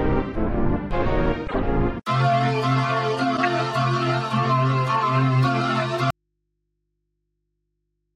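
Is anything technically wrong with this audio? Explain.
Yes. There are two corrupt frames decoded and one dropout.

At 1.47–1.55 s and 3.37–3.39 s, corrupt frames were decoded. Each spans roughly three frames. Damaged bits put energy at wrong frequencies, heard as a chirp, squeak, blip or noise burst.

From 6.10 s to the end, the audio drops out to a faint residue. Only hum remains, about 55 dB below the signal. This likely comes from a lost signal with a live, open input behind it.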